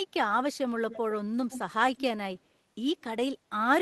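A speech clip in which the far end's echo canceller, likely on a loudspeaker phone, failed to remove everything its microphone picked up, so an echo leak sends a copy back about 110 ms behind the original. The delayed copy surfaces in three short bursts: 0.90–0.99 s, 1.50–1.73 s and 1.97–2.01 s. It is loudest in the middle burst and only a faint trace in the last, giving a doubled edge to the speech.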